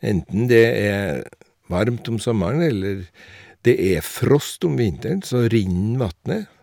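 Speech, with hard clipping from 0.57 to 0.64 s. The signal overdrives a stage by about 2 dB, so its peaks are sheared flat. Those squared tops add high harmonics. The result is a brief crackle on the loudest moments there.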